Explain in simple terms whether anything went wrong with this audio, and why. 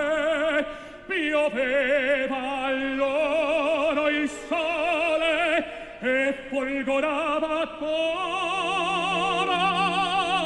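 Nothing went wrong here: the clip is clean throughout, with no technical faults to be heard anywhere in it.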